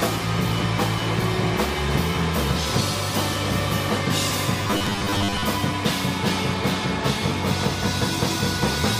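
A stretch of robotic sound from repeated short buffers runs from 4.63 to 5.44 s. The audio there turns into a rigid, metallic buzz locked at 100 Hz, which points to a 10 ms fragment being replayed, with roughly half of the material replaced by repeats. The likely cause is new audio arriving too slowly and the gaps being filled by looping the last buffer. Unlike a plain dropout, nothing goes silent, and the buzzing sound still loosely tracks the original.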